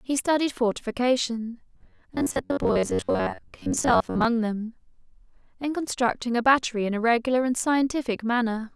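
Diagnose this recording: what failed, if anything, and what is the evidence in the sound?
The driver buffer likely underran: from 1.75 to 4.25 s, half the speech becomes repeated 10.7 ms blocks, giving a robotic sound buzzing at 94 Hz.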